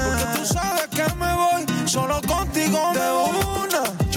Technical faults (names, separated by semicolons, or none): gain pumping